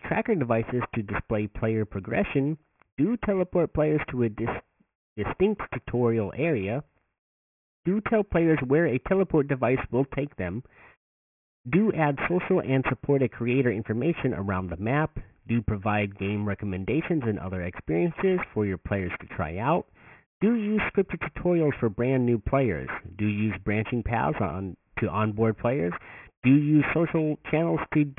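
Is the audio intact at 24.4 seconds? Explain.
No. At 24.4 s, as across the whole speech clip, there is aliasing. The sample rate was reduced without an anti-aliasing filter first; the fold point sits at 3 kHz, which fits a drop to a 6 kHz rate. Content above 3 kHz is mirrored back below it as unrelated frequencies, sitting roughly 15 dB under the signal. Sibilants come out gritty and metallic, and the spectrum runs hard up to the 3 kHz edge.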